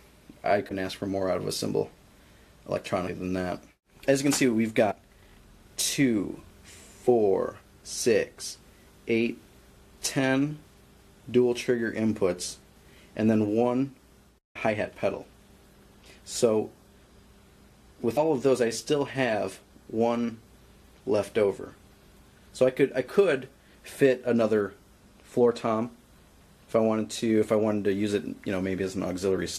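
The audio jumps forward four times, from compressed frames skipped: at 0.68 to 0.72 s, at 3.07 s, at 4.90 to 4.92 s and at 18.16 s. Roughly 50, 150, 70 and 100 ms of sound vanish. Whole frames went undecoded.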